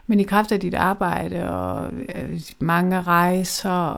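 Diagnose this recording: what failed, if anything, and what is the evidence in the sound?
From 1.0 s to the end, the speech drops to two-thirds pace at unchanged pitch. Likely a time-stretched section, padded by repeating short slices.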